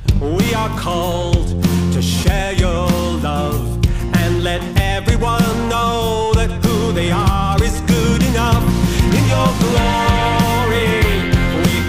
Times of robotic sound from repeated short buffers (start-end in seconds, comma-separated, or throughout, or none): none